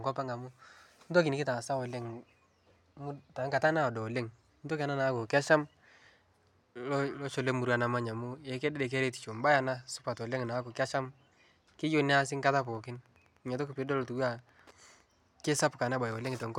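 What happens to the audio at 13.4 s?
Wi-Fi interference runs from 12.18 s to 15.04 s, so 13.4 s falls inside it. A nearby Wi-Fi radio's transmissions are being picked up and rectified by the audio circuitry, turning each beacon into a small audible click. The beacons repeat every 102.4 ms, giving a steady ticking of roughly ten per second beneath the speech. It sits far below the speech, at around 40 dB down, so it is most noticeable in pauses.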